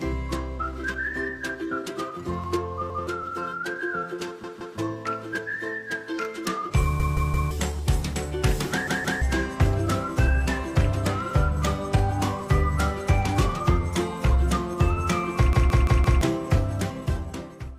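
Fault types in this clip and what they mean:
Clock drift between sender and receiver: The sending end's clock runs fast, by roughly 4 percent, so audio arrives quicker than the receiver plays it out. The buffer keeps overfilling, and the receiver has to keep adjusting to stay in step for the whole clip.
Repeated timing corrections: From about 0.58 s to the end, the receiver keeps trimming small pieces to keep pace with the 104 percent sender. The edits all go the same way but are unevenly spaced.
Repeated buffer: Five times, at 2.90, 4.44, 7.00, 8.88 and 15.53 s, one chunk of about 0.17 s replays one to four extra times with hard joins. This fits an 8192-sample buffer and causes audible stutters, the longest near 15.5 s, where nearly three-quarters of a second goes missing.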